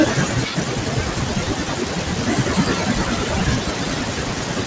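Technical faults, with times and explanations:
Throughout: noise suppressor artifacts. The suppressor keeps pulling down whichever bands it judges to be steady noise, frame by frame, so the noise sinks between the words and rises under them. The room noise swells by about 15 dB around two and a half seconds.
0.00–4.66 s: speech cut by the noise suppressor. The suppressor mistakes parts of the speech for noise and attenuates them with the background, by about 21 dB at the deepest. Those parts sound swallowed or faint across the whole clip.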